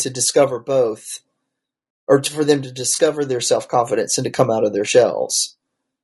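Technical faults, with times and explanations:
Throughout, low-delay AAC compression: the speech is rough and grainy, with noise filling the gaps between harmonics and a thin, somewhat synthetic top band. This likely comes from AAC-ELD at a low rate, around 32 kbps, where its short frames resolve pitch harmonics poorly.
2.95 to 2.99 s, AAC frame loss with concealment: between "to for them to" and "their self confidence and" a brief smeared, noisy patch of about 40 ms appears, consistent with one lost 20 ms frame that the decoder filled by reusing the previous spectrum with altered phase.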